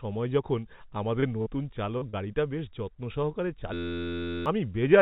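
Short concealed packet loss occurs four times: at 1.20 s, 1.42 s, 1.98 s and 2.09 s. In each case a stretch of about 20 to 40 ms of speech arrived too late to decode, and the receiver covered the gap by extrapolating the preceding sound, then crossfaded back into real audio. The repairs last roughly 20 to 37 ms and come across as brief smears or wobbles.

A system hang loop runs from 3.74 s to 4.46 s. The host stalled while the audio hardware kept replaying the same ring buffer, so one 11.6 ms fragment repeats about 62 times. At that length the repetition rate is 86.1 Hz, heard as a steady buzz, which fits a 512-sample buffer. About 0.7 s of real speech is replaced. Throughout, the band stops at 4 kHz, in keeping with a narrowband telephone codec.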